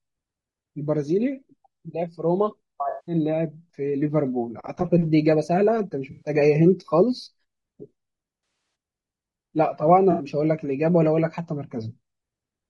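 The speech is rough and grainy from start to finish. Noise fills the spaces between the harmonics. The top band sounds thin and synthetic. This is likely low-delay AAC compression, the AAC-ELD style used in video calls. Its short frames resolve pitch poorly. The damage is plainly audible and fits a bitrate around 32 kbps.

There are four patches of AAC frame loss with concealment. At each one, whole frames went missing. The decoder then rebuilt the sound from the last good spectrum. The first runs from 2.89 to 3.15 s, with 180 ms lost. The second runs from 6.11 to 6.29 s, with 100 ms lost. The third spans 8.43 to 8.75 s. There, 160 ms of losses are scattered across 320 ms, and the longest gap is around 70 ms. The last runs from 10.11 to 10.25 s, with 80 ms lost.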